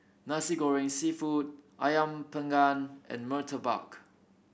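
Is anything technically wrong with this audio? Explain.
No, nothing technically wrong turns up here; this speech recording comes through without any fault worth pointing out.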